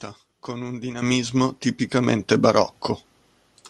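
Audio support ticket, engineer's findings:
Microphone volume stepped up at 1.02 s, just after "con un", then again at 2.04 s. Voice and background jump together by about 10 dB, then about 4 dB. Likely the call software's automatic input gain raising the device level in single steps.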